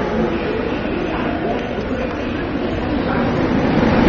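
From the start, the audio is dull and smeared, with nothing above 6.9 kHz. This is AAC compression, likely AAC-LC at a low rate, around 24 kbps. Starved of bits, the encoder drops the top band and coarsely quantises the rest. Sustained parts warble and fizz.

From 1.25 s to the end, a time-stretched section plays 1.76 times faster. The pitch holds, but the pace jumps abruptly. Short pieces were likely dropped to squeeze the length. The sound turns rushed.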